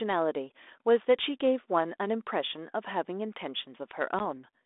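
A speech clip carried over G.726 ADPCM at 32 kbit/s, band-limited to roughly 300 Hz to 3.6 kHz with light coding grain, shows packet loss on an ADPCM call at 4.19 to 4.26 s. About one packet's worth, 10 ms, drops to a hard-edged silent gap. The decoder's adaptive predictor and step size then restart out of step with the sender's, so the speech comes back briefly slightly distorted until the adaptation re-converges.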